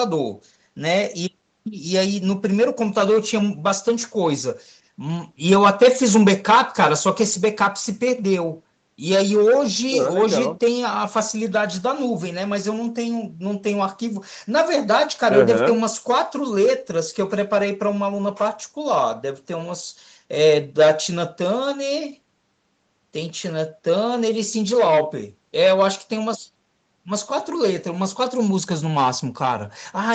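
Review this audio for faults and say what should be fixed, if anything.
Nothing stood out on listening, so there is nothing here that needs fixing.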